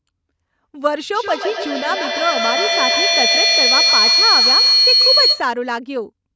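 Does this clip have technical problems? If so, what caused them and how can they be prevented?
Yes. A feedback howl runs from 1.14 to 5.58 s. A tone near 4 kHz grows until it is about 6 dB louder than the speech. It pulses roughly every 150 ms. Two devices in the same room were likely joined to one call. Each trip from loudspeaker to microphone and back made the sound louder. The loop favoured that band, so the sound narrowed into a howl. Mute or separate the second device, or use headphones, to break the loop.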